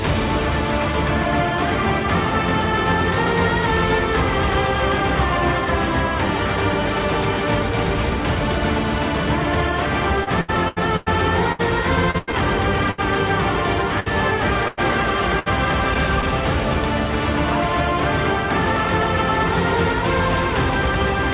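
Repeated packet loss (robotic sound) runs from 10.24 to 13.00 s. Packets keep failing to arrive, and each hole, the longest 100 ms, is patched by stretching the preceding sound before the next dropout hits. About a fifth of the stretch is filler, so the audio turns choppy, with fragments missing.

Bursts of packet loss follow at 14.00 to 14.08 s, 14.68 to 14.79 s and 15.39 to 15.48 s, losing 60, 100 and 60 ms. Each time the receiver extends the last sound and fades it, giving a held buzz or fading hiss before playback jumps ahead past the lost audio.

Short concealed packet loss occurs at 15.94 to 15.97 s and 16.21 to 16.24 s, each dropping 20 ms. The decoder briefly continues the prior pitch or shaped noise and blends back, heard as a small smear or wobble. Nothing above 4 kHz is present throughout, fitting G.711 mu-law at 64 kbps.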